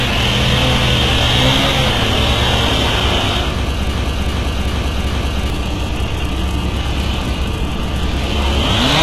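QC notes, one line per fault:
throughout: mains hum. A ground loop or nearby transformer couples the 60 Hz power line into the signal, leaving a steady low tone only about 10 dB below the sound.
throughout: HE-AAC compression. The codec likely coded only the lower spectrum and synthesized the treble above the crossover, so the top sounds gritty and metallic. Nothing remains above 12.3 kHz, which fits a very low bitrate near 16 kbps.
3.94–5.50 s: broken-record loop. The stream likely stalled and kept resending its last fragment, so a 391 ms piece repeats four times back to back and the audio that belonged there is lost.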